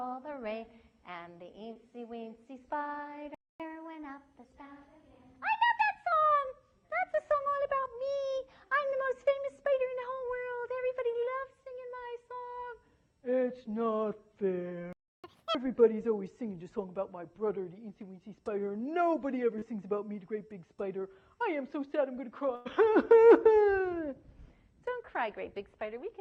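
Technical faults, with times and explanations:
1.73–1.77 s and 19.59–19.64 s, short concealed packet loss: In each case about 20 ms of audio failed to arrive in time, and the receiver patched the hole with roughly 19 ms and 23 ms of synthesised continuation. It extended the preceding sound as pitched material or shaped noise, then cross-faded back. The result is a brief smear. On a spectrogram, fine detail blurs into a repeated or noisy patch a couple of frames wide, with no gap in the waveform.
3.35–3.60 s and 14.93–15.24 s, playback stall: The output falls silent mid-flow for about 252 ms and then about 310 ms. The likely cause is the player running out of buffered data or its thread being blocked. The waveform shows a flat, empty stretch at each point, and the spectrogram shows a clean vertical blank band. The sound resumes abruptly when playback recovers.
3.60–6.12 s and 15.24–15.55 s, catch-up at higher speed: After each stall the player resampled its backlog to make up the delay. 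The first run plays at 1.1 times speed for about 2.5 s, raising pitch about one and a half semitones. The second plays at double speed for about 0.31 s, raising pitch around 10 semitones. Each run wins back roughly the time lost. On a spectrogram, harmonics and formant bands shift upward and events compress in time until normal speed returns.
22.56–22.67 s, burst of packet loss: A run of packets was lost or arrived too late, leaving roughly 100 ms of audio missing. The receiver filled about 95 ms by continuing the last sound while fading it down. This comes across as a held buzz or a fading hiss, after which the audio jumps ahead. On a spectrogram, the frozen, smeared band decays in level before real detail returns, with a discontinuity at the rejoin.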